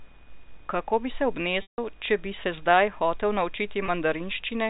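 At 1.62 s the speech drops out until about 1.78 s. This is packet loss with pitch repetition. About 160 ms of audio never arrived, which fits eight 20 ms packets. The receiver looped the last pitch period, so you hear a brief held buzz. It fades to silence, and the speech returns through a short cross-fade. At 3.86 s a single 20 ms loss gets the same treatment. It sounds like a slight buzzy hold. The G.711 telephone band is audible throughout.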